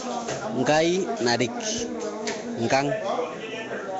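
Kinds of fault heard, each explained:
Nellymoser compression: throughout, speech is rough, hissy and smeared with nothing above 7.7 kHz, likely Asao coding filling starved bands with noise, fitting a 32 kbps stream.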